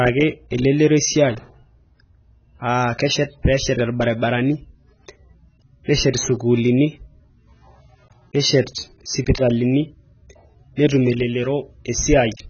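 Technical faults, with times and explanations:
Throughout, AAC compression: the speech is dull and smeared, with nothing above 6.5 kHz and a warbling, fizzy texture on sibilants and held vowels. The likely cause is a heavily squeezed AAC-LC encode, and the damage points to a bitrate near 16 kbps. A plain low-pass filter would only darken the sound. Here the remaining band is also patchy, with spectral holes and noise-filled regions shifting frame by frame, which betrays the codec.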